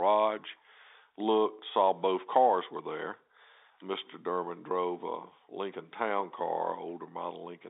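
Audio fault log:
No faults are heard in the speech. It carries the narrow band of G.711 telephone coding, from about 300 Hz up to 3.7 kHz, with coding noise faint at most.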